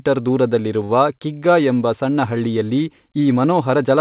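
At 0.84 to 0.92 s, just before "ಕಿಗ್ಗಾ ಎಂಬ", there's a short stall from a late packet. The jitter buffer ran dry, so the last sound gets stretched about 49 ms with a faint buzzy hold, then carries on. Nothing is lost, just delayed, over a narrowband call path that stops at 4 kHz.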